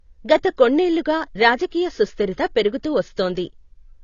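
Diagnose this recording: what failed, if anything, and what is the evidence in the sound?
The failure sits at the codec stage: the speech carries plainly audible AAC compression damage from start to finish. Nothing is present above 7 kHz, so the sibilants sound dull and blunted, and the remaining bands have a smeared, warbling texture. This is likely AAC-LC running at a starved rate, which fits a bitrate around 24 kbps. The encoder lowered its cut-off and quantised the frequency lines coarsely against its hearing model.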